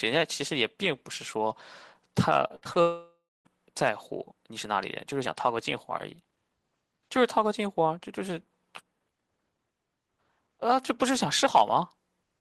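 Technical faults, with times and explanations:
2.47–2.77 s, repeated packet loss (robotic sound): the speech turns choppy and robotic, breaking up four times in quick succession. Each break is a small hole where audio never arrived in time, patched by stretching the last bit of sound forward before the next hole arrives. About 120 ms goes missing across this stretch, the longest hole about 62 ms, so roughly 40% of the span is synthetic fill, which gives the robotic texture.
2.81–3.47 s, long network dropout: right after the choppy patch, the speech gives way to a smeared buzz that fades out, followed by about 240 ms of silence before speech resumes further along, with about 640 ms gone entirely. The likely cause is a sustained interruption of the incoming stream: the receiver carries the last sound forward as a decaying tone while nothing arrives, then gives up and mutes until packets flow again, so the missing piece is never recovered.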